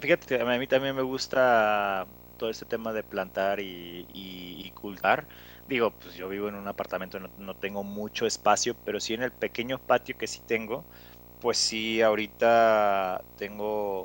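From start to finish, video or display buzz sits under the speech: a hum-like buzz at 59.94 Hz, the field rate of a 60 Hz-family picture signal, with a band of hash above it and a thin whistle at 15.7 kHz, the line rate of the scan. A screen or video cable is coupling its timing signals into the audio path. The buzz stays steady, around 25 dB below the speech.

From 5.01 to 5.05 s there is damaged data in a compressed stream. For about 40 ms the decoder is fed corrupted frames, misreads them, loses frame sync and hunts for the next valid header. The result is a brief glitch in the speech where that stretch of audio could not be reconstructed.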